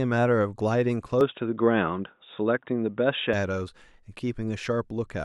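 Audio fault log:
1.21–3.33 s, input switched to a poorer device: the sound turns abruptly dull and boxy, with nothing above 3.8 kHz, then clears again at 3.33 s, with no gap at either switch. The likely cause is the recorder changing to a narrower-band microphone or headset profile and then back. Unlike a simple low-pass filter or a codec bandwidth drop, the tone colour, a modest level shift and a faint new noise floor well below the signal all change together.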